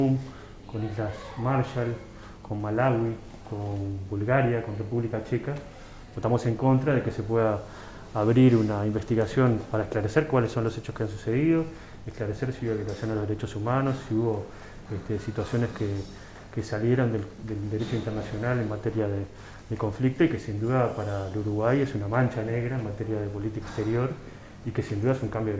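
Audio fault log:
Nothing stood out on a careful listen to this audio.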